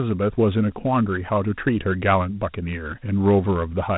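Dialogic VOX ADPCM coding, at a rate that fits 32 kbps, runs throughout this short speech recording, leaving nothing above 3.9 kHz and a plainly audible gritty hiss trailing the speech.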